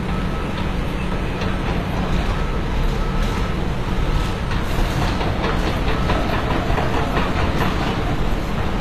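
Throughout, HE-AAC compression likely rebuilds the treble from copied lower bands at a bitrate near 24 kbps; the highs sound gritty and metallic and stop at 14.9 kHz.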